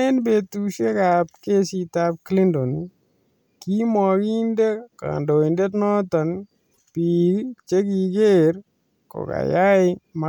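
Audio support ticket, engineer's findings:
Short broken burst, 6.73–6.78 s, right after "kaindondet noton". Speech jumps ahead, then about 54 ms of garbled audio. Length fits two 26 ms MP3 frames. Likely a broken MP3 bit reservoir in the decoder path: frames dropped upstream, so the next frame borrowed stale bytes. Spectrogram shows a brief disruption of the harmonic bands. Waveform shows a brief discontinuity.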